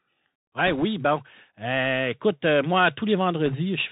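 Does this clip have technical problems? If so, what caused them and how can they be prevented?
Yes. The whole recording passes through the Bluetooth CVSD headset codec, whose one-bit delta modulation, consistent with a 64 kbit/s link, cuts everything above 4 kHz. On a spectrogram the energy stops at a flat 4 kHz ceiling. The adaptive step can't keep up with loud high content, so s sounds turn scratchy, and a granular hiss sits under the speech, visible as a grainy noise floor. Prevention: use a wideband headset profile such as mSBC or LC3 instead of CVSD.

Bit errors on a Bluetooth voice link appear from 0.67 to 0.85 s and again from 3.46 to 3.56 s, just after "écoute moi". Flipped bits at an error rate of around 1.5 percent add a rushing, crackly noise without loud clicks, because each CVSD bit moves the signal only one small step. The waveform shows a fuzzy thickening rather than spikes, and the spectrogram shows short patches of broadband haze below 4 kHz. 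Prevention: keep the headset close to the host and away from 2.4 GHz interference.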